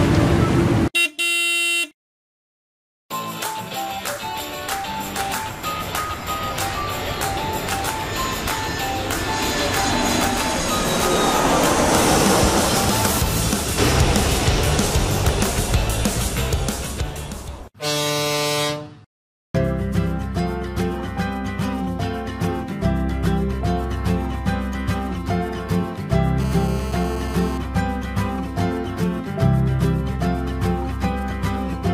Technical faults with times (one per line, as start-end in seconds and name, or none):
26.40-27.58 GSM phone buzz